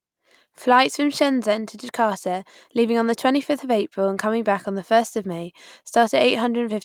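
Nothing in this bit of speech stands out as a technical problem, so there's really nothing here to point to.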